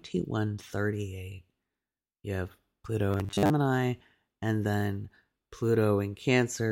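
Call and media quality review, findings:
Robotic sound from repeated short buffers, 3.11–3.51 s: metallic 100 Hz buzz, likely starved input looping a 10 ms chunk while most of the real audio gets skipped.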